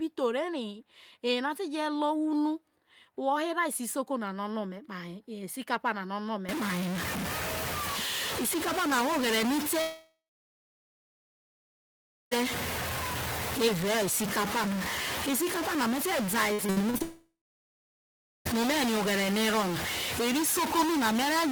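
From 6.49 s to the end, the speech picks up distortion, and pauses fill with noise. A stuck bit is the likely cause.

At 9.81 s a long network dropout likely begins. The last sound trails off as a fading buzz or hiss, then about 2.15 s of silence. Speech returns at 12.33 s with 2.5 s lost.

From 16.53 to 17.02 s, repeated packet loss leaves five short holes, the longest 58 ms. Patching them makes the speech choppy.

A second long network dropout likely follows from 17.02 to 18.47 s. About 1.44 s is lost: a brief fading fill, then roughly 1.14 s of silence.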